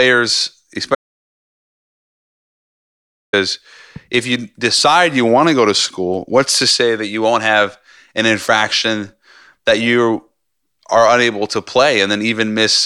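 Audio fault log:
0.95–3.33 s audio dropout to silence: the speech stops mid-flow for 2.38 s of dead digital silence, likely a lost input; the waveform shows a flat line and the spectrogram a blank band.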